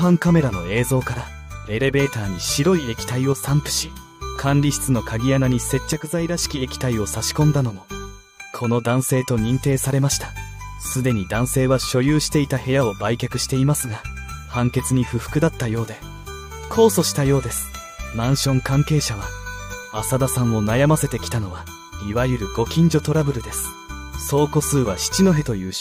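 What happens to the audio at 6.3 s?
At 6.3 s the sound sits inside a sudden drop of about 6 dB lasting from 5.93 to 6.38 s, likely one channel dropping out: with a stereo channel lost, the mono sum halves abruptly. Unlike a full dropout, it never falls silent, and unlike a gain dip, it has no fade.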